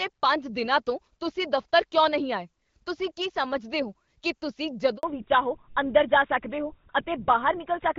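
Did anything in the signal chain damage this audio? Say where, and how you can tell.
Yes. At the network stage, the call underwent a handover gap from 4.97 to 5.03 s. While the connection moved between networks, no speech frames reached the decoder for about 60 ms. The speech fades out over a few tens of milliseconds and then drops to silence until the new link delivers audio again. The syllable material falling in that window is simply missing, so the speech jumps abruptly across the join.

Right after that handover, from 5.03 s to the end, the call fell back to narrowband. Before the switch, the wideband codec carries content up to about 7 kHz with only light coding damage, consistent with HD Voice around 12.65 kbit/s. After the switch, nothing remains above 4 kHz, which points to an older codec such as GSM full rate at about 13 kbit/s. The speech turns duller and rougher.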